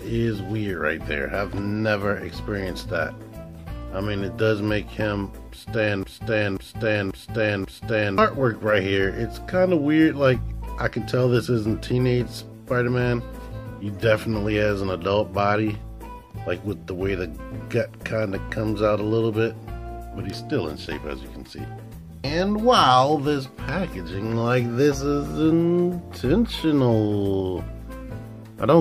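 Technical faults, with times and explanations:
6.03–8.18 s, broken-record loop: a 0.54 s fragment plays four times back to back, likely because the player, encoder or stream stalled and kept resending its last chunk. The waveform and spectrogram show four identical repeating blocks, and the audio due in that span is lost.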